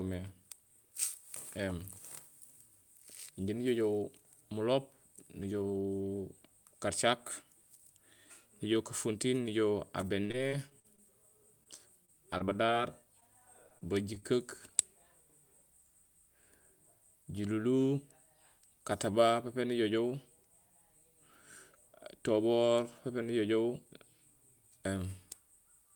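From 10.01 to 11.00 s, 12.05 to 12.70 s and 13.69 to 14.24 s, repeated packet loss keeps punching holes of up to 50 ms that the decoder patches with extended sound, leaving the speech choppy and robotic. At 11.64 to 11.67 s and 13.20 to 13.23 s, short concealed packet loss drops about 20 ms each time, heard as a brief smear or wobble.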